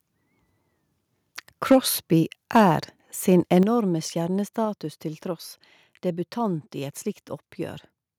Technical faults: microphone overload; microphone volume stepped down

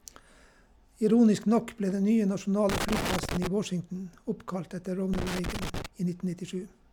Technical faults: loose connector crackle

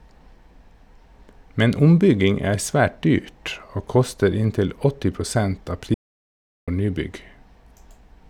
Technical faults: audio dropout to silence

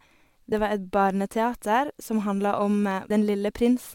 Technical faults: damaged data in a compressed stream

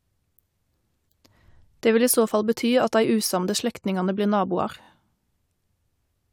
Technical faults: repeated frames

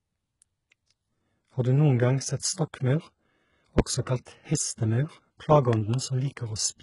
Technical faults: HE-AAC compression; loud pop; pre-echo

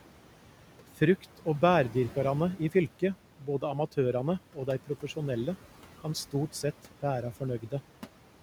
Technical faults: noise suppressor artifacts; speech cut by the noise suppressor

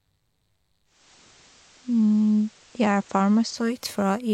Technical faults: digital radio blending to analogue

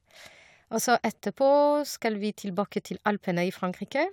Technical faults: none

